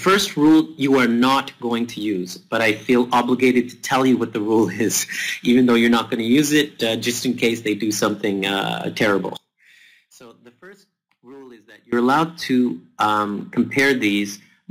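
One channel inverted, from 9.37 to 11.93 s: the sound drops by about 27 dB and only a residual copy remains. The likely cause is one stereo channel with reversed polarity, so their shared content cancelled when summed to mono.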